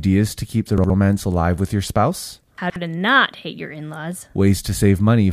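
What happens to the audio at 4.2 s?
Nothing goes wrong at 4.2 s; the speech there is intact, with no dropout, click or distortion.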